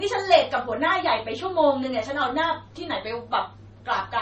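Throughout, the speech carries transcoding between lossy codecs, likely MP3 then Vorbis, stacking warbly, smeared artefacts; a spectrogram shows nothing above 8.4 kHz.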